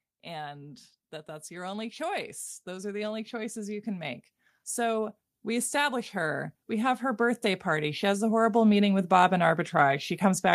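From 0.25 to 4.23 s the whole recording, speech and background alike, swells steadily by about 8 dB, then from 4.74 to 10.1 s climbs again by about 10 dB: automatic gain rising, as the gain control judges the input too quiet and slowly lifts it.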